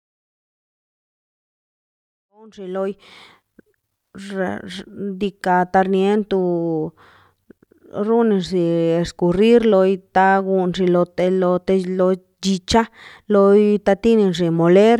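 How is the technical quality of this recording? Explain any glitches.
The speech recording has no technical glitches, and the level rises in a smooth, deliberate fade-in from around 2.5 s that reaches full level at 3.62 s with no click or hard edge.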